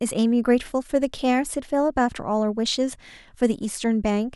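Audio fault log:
No faults can be heard anywhere in this speech.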